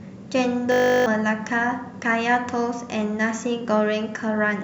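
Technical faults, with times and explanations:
0.72–1.06 s, system hang loop: the speech stops and a steady buzz at 50 Hz takes its place, because one 20 ms slice of audio repeats seventeen times. The computer or its audio driver stalled, and the sound hardware kept replaying the same short stretch of its ring buffer until the system recovered. With so short a loop, the repeats merge into a tone instead of a stutter, and roughly a third of a second of speech is lost.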